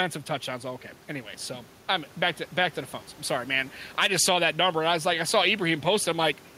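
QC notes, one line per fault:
throughout, gain pumping: input gain is likely set far too high, with a fast limiter pulling level down on each loud syllable, swinging gain roughly 5 dB. The room noise sits about 31 dB below the speech, and dynamics are squashed.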